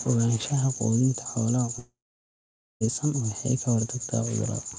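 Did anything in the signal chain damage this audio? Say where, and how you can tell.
Yes, at the network stage. From 1.79 s to 2.83 s the speech breaks off. For a brief moment the last sound carries on as a fading buzz, then about 0.86 s of near silence follows before the speech resumes with roughly a second of it simply gone. That sequence is the signature of a long network dropout, most likely packets that never arrived, with the receiver's concealment stretching the final sound until it gave up. The call codec's band limit, with nothing above 8 kHz, holds steady on both sides of the gap.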